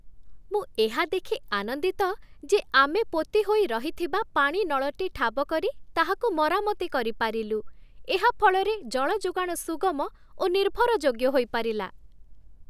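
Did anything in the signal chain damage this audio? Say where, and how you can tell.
No, nothing in the signal chain has damaged this speech recording. No stage, from capture through to playback, can be heard interfering with the audio at any point.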